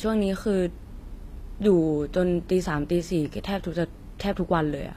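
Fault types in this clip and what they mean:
HE-AAC compression: The treble of this speech sounds rebuilt rather than captured. The sibilants come out gritty and lispy, with a metallic sheen. The damage is plainly audible throughout. Nothing sounds above about 14.9 kHz. The likely cause is a codec that codes only the lower spectrum and fills in the top by copying lower bands upward. Its harmonics fail to line up across the join, and the bitrate is near 24 kbps.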